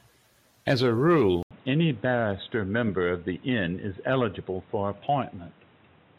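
Speech that, after an 80 ms dropout at 1.43 s, turns dull and boxy with nothing above 3.8 kHz and new background noise well down. Likely an input switched to a poorer device.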